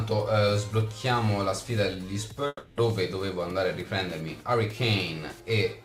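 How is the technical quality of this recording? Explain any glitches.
A long network dropout runs from 2.47 to 2.80 s. The audio likely stopped arriving for about a third of a second, and the receiver filled the gap by extending the last sound it had, roughly 300 ms of concealment heard as a buzzy, fading continuation. That tail dies into about 20 ms of silence before the stream resumes. The original 300 ms of sound is lost, so playback picks up later without it.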